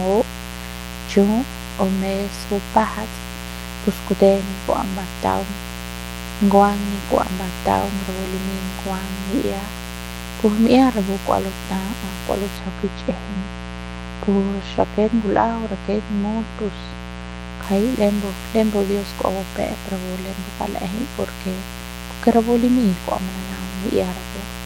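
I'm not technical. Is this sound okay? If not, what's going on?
No. Mains buzz runs through the whole recording: a fairly loud, raspy hum from 60 Hz electrical power leaking into the audio, likely from a dimmer or poorly shielded cable.

De-emphasis applied wrongly from 12.57 to 17.63 s: the treble was cut when it shouldn't have been, so the speech turns dull and muffled, as if heard through a blanket.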